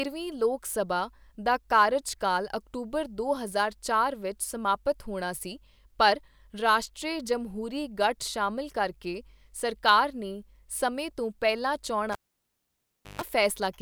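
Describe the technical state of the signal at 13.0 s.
At 13.0 s the speech is cut by a cable pulled and plugged in, spanning 12.12 to 13.22 s, right after "ਸਮੇਂ ਤੋਂ ਪਹਿਲਾਂ". A pop opens about 1.04 s of near silence. Just before reconnection, roughly 140 ms of 50 Hz mains buzz leaks in as the plug tip touches, then a second pop. That buzz burst between the pops sets it apart from a plain dropout.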